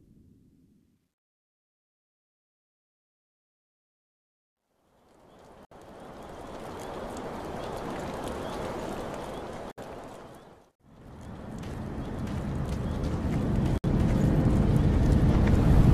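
You've got a gap at a join of encoded pieces, and it repeats: roughly 64 ms dropouts at 5.65, 9.71 and 13.78 s, spaced 4 s apart. The sound just cuts out with smeared edges, then resumes exactly where it left off. That regular spacing suggests the audio was encoded in 4-second chunks and stitched together without trimming each run's leading encoder delay and last-frame padding, so that silence ends up sitting at every seam.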